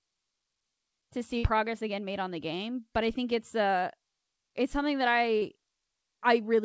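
At 1.38 s there's a burst of packet loss running to about 1.45 s. Roughly 60 ms of audio never arrived, and the receiver papered over it by stretching the last sound for about 54 ms while fading it down. You hear a held buzz or fading hiss there, then the speech picks up further along with that stretch simply gone. Everything sits below 8 kHz here, which fits a G.722 call path.

Later, at 5.37 s, there's a short concealed packet loss lasting to about 5.44 s. About 40 ms went missing, and the receiver filled roughly 43 ms by carrying on the last sound, following its pitch if voiced and using shaped noise if not, before blending back into the real signal. It comes across as a quick smear or wobble, and any brief consonant in that spot can drop out entirely.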